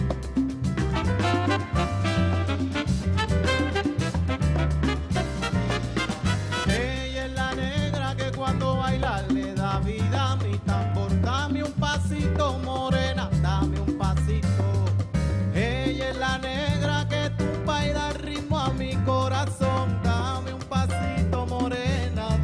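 No technical faults can be heard anywhere in the audio, with the signal holding steady and intact throughout.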